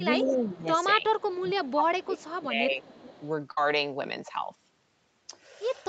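From 0.21 to 0.69 s the speech dips by about 15 dB, most likely speech suppressed in double talk: the echo canceller cannot separate talker from far-end echo and attenuates both. Over 0.25 to 0.58 s an echo leak is audible at about 10 dB below the speech, a copy delayed by 388 ms, likely residual loudspeaker pickup the canceller failed to remove.

Fainter leaks at about 30 dB down follow at 1.18 to 1.36 s, 1.64 to 1.69 s and 2.0 to 2.24 s. In between, from 1.36 to 2.83 s, the speech is again pulled down by up to about 20 dB, likely double-talk suppression.

A stronger leak, about 25 dB down, runs from 2.82 to 3.28 s. All the leaks share the 388 ms delay.

From 3.51 to 3.58 s a burst of packet loss removes 60 ms of audio. The receiver fills 53 ms by stretching the last sound into a fading tail, then resumes further on.

The call's microphone processing limits the band to 8 kHz, which is expected.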